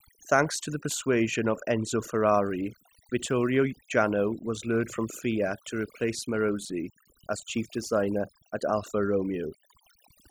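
From start to finish the speech carries overdone noise removal: bands near the noise estimate were pulled far down or off, taking quiet speech detail with them. Pauses sit near silent with twinkling specks, and a spectrogram shows isolated scattered dots between words and holes through the voice's harmonics.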